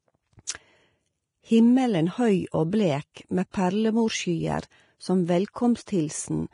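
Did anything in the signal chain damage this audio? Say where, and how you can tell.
Yes, at the codec stage. The speech sounds grainy and hissy throughout, with smeared consonants and nothing above 10.6 kHz. A spectrogram would show a flat ceiling there, with speckled, noisy treble beneath it. The likely cause is heavy Vorbis compression, at a rate that fits around 30 kbps.

Pre-echo, also from the codec: from 3.14 to 3.17 s a short hiss rises about 26 ms ahead of a sharp onset, which sounds softened. On the waveform, low-level noise comes before the transient, because quantisation noise spread across the transform block leaked in ahead of the attack.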